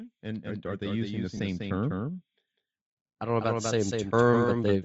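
Doubled audio track, throughout this speech clip: a second, full-band copy of the same audio trails the original by roughly a fifth of a second at about 5 dB lower, giving a clipped, stuttering echo with no reverberant tail or room colour. Because the copy is identical and fixed in time rather than decaying, it is likely a second capture through a slower path or two misaligned copies in an edit, not a real reflection. Bluetooth LC3 compression, also throughout: the speech has a plainly audible breathy, grainy edge, with the upper band thinned out and replaced by noise-like fill instead of real detail. That sound fits a low-bitrate LC3 stream, around 32 kbps with 7.5 ms frames, where the codec cannot afford to code the high spectrum and substitutes noise. Automatic gain rising, from 0.23 to 2.3 s and again from 3.2 to 4.79 s: the level swells by about 10 dB in the first stretch and about 6 dB in the second, with the speech and the background noise climbing together. 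This is a gain control that judged the input too quiet and raised its gain slowly over more than a second. Because the gain applies to everything at once, the background rises along with the speech. Lost LE Audio frames, at 1.37 to 1.40 s: a 22.5 ms gap, consistent with about three 7.5 ms frames missing, is filled by a brief noisy smear in place of the speech. The decoder covers the loss by repeating the last spectrum with randomised phase signs, so the gap holds a roughened copy of the preceding sound rather than silence.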